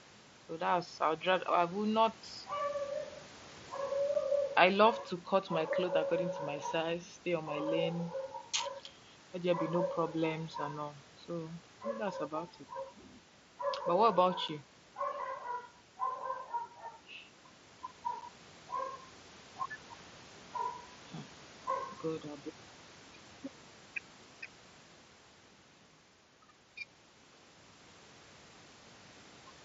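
At 4.14, 14.48 and 18.21 s, the speech drops out abruptly. This is unconcealed Bluetooth headset packet loss. Each hole lasts about 7.5 ms, which fits a single lost frame. Nothing fills the gap, so silence or an idle pattern replaces the speech. The mSBC wideband link carries the rest.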